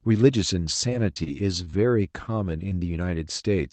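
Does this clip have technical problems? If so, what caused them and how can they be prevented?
Yes. Repeated packet loss (robotic sound) runs from 0.89 to 1.75 s. Five gaps, the longest 28 ms, were patched by extending the preceding sound, leaving around 150 ms rebuilt, so the speech turns choppy. Prevent it with a steadier network link and a jitter buffer deep enough to absorb late packets.

Lost packets rebuilt from error correction appear at 2.47, 2.51, 2.59, 2.71 and 2.85 s, each 20 ms long. Opus decoded the low-bitrate backup copies carried in the following packets, so those moments sound rough and noisy but have no gaps. Prevent it by reducing packet loss on the route, for example with a wired connection or less congestion.

A short concealed packet loss spans 2.69 to 2.73 s. Roughly 20 ms never arrived and was filled by continuing the last sound, which produces a brief smear. The final part of that stretch was recovered from the error-correction copy at 2.71 s. 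Prevent it by keeping Opus forward error correction enabled and improving link stability so that single losses are rarer.

The call path itself runs through Opus with audio extending to 8 kHz.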